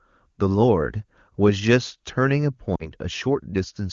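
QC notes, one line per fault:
2.75–2.88 s: lost AMR speech frames. About 40 ms of speech goes missing, which fits two 20 ms frames failing their checksum. The wideband decoder repeats the last pitch and vocal tract settings with falling gain. The sound briefly drops to near silence, then returns weak for a moment.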